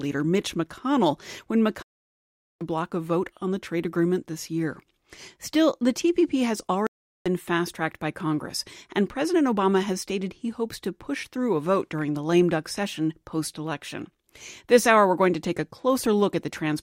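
At 1.82 s the sound drops out for about 0.78 s and comes back at 2.64 s having skipped ahead by roughly 0.7 s. At 6.87 s a shorter gap of about 0.39 s ends at 7.27 s with a jump of roughly 0.2 s. Both are stream reconnects: the connection broke, playback went silent, and a fresh decoder picked the live stream up at a later point.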